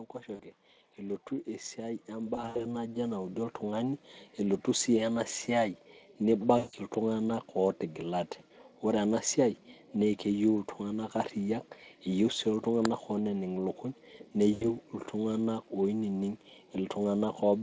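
Brief buzzy, smeared patches that fade out break up the speech at 0.35–0.41 s, 2.35–2.66 s (several short dropouts in a row), 6.57–6.75 s and 14.53–14.72 s. These are VoIP packet loss concealed by the speech codec: the Speex decoder stretches its last pitch and filter while reducing the gain. From 0.96 s to 4.01 s, speech and background swell together by about 10 dB, ending just before "elotu si enasiai". That is automatic gain rising, as the gain control slowly pushes up a quiet input.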